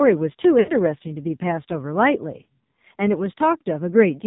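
Throughout, the speech sounds buzzy, synthetic and dull, with nothing above 4 kHz. This is heavy AMR narrowband mobile codec damage, which fits a low mode near 5.9 kbps. From 0.60 to 0.72 s, the sound drags out and fades toward silence, then returns rough. These are lost AMR speech frames: about 80 ms of frames were missing and filled by decaying repeats.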